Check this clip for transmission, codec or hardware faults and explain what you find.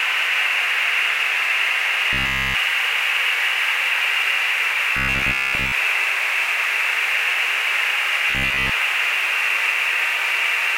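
There's one recurring fault: robotic sound from repeated short buffers, at 2.13–2.55 s, 4.97–5.73 s and 8.30–8.71 s. Each turns into a rigid metallic buzz near 66.8 Hz, likely from a roughly 15 ms chunk being looped while fresh audio was late. The first stretch is entirely buzz; the later two mostly.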